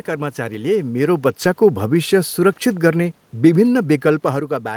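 From 0.61 s to 4.52 s, automatic gain falling pulls the level down by about 5 dB as the gain control reacts to an input too loud, or too noisy, for its starting gain. Unlike the talker shifting position near 0.5 s and 4.0 s, this slow decline takes the room noise down with the voice, so the whole recording sinks together.

Between 1.43 s and 1.45 s, a lost packet rebuilt from error correction shows up as a brief rough, noisier patch with no gap or dropout. The decoder played the low-bitrate backup copy carried in the following packet. The length fits a single 20 ms frame. The continuity distinguishes it from concealment of an unrecovered loss.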